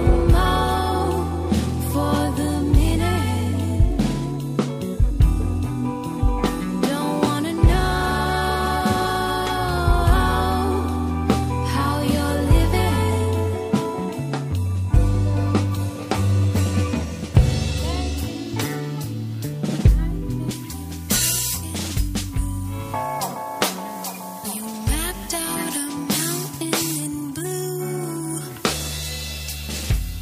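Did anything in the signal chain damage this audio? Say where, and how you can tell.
Yes. From 20.51 s to the end, the top end jumps up, and the sound turns thin, bright and hissy at the edges. That's pre-emphasis left on. The treble lift, a J.17-style curve of about 11 dB at 10 kHz relative to 1 kHz, went in at the recording or transmission stage, and the matching de-emphasis never got applied afterward.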